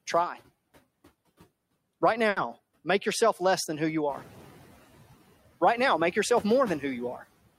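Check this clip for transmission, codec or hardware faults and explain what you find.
Three faults stand out in this speech clip: processing artefacts from a noise suppressor throughout, a brief stall from a late packet, and a moment where the suppressor lags behind a jump in background noise.

Noise suppressor artifacts run through the whole clip. The suppressor estimates the steady noise in each frequency band and pulls those bands down frame by frame, here by about 16 dB. The residual noise therefore sinks in the gaps between words and swells back under them. Low-bitrate codec artefacts would instead smear the speech itself. Here the giveaway is that the colouring follows the noise floor, pumping in step with speech and pauses.

A short stall from a late packet occurs at 2.29 to 2.38 s, just before "make yourself less than". A packet arrived late and the jitter buffer ran dry, so the receiver stretched the last sound by about 70 ms, then resumed exactly where it had stopped. 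The result is a held sound with a slight buzz or dip and a small timing slip of about 70 ms. Nothing is missing. A lost packet would leave a gap or concealed patch with content skipped, whereas this one only pauses and continues.

The noise suppressor catching up happens from 4.09 to 4.53 s, right after "less than who you". Around 4 s the room noise rises by about 14 dB. That rise is genuine background in the recording and settles about 17 dB below the speech. The suppressor's noise estimate trails behind it, so at first the noise gets only about 8 dB of reduction. It then sinks over roughly 440 ms as the estimate adapts to the new level. This differs from the room noise itself in that the loudness fades on its own while the background stays steady.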